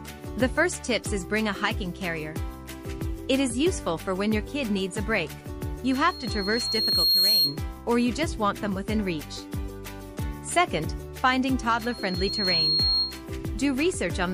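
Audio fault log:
5.84–7.59 s and 11.78–13.22 s, loudspeaker feedback squeal: a piercing 4.3 kHz tone swells over about a second and a half the first time and well under a second the second time, ending about 5 dB above the audio. The microphone is hearing its own loudspeaker, and the loop gain at that frequency passes unity.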